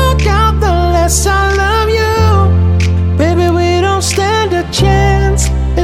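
A single flipped bit at 3.49 s throws one sample to about -3 dBFS, a bit error spike heard as one sharp, broadband tick unrelated to the sound.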